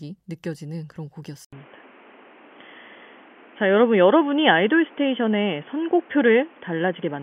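At 1.45 s the speech drops out for 80 ms, then returns dull and boxy, with nothing above 3.4 kHz, a level shift of roughly 5 dB and new background noise about 30 dB down. This persists to the end, likely an input switched to a poorer device.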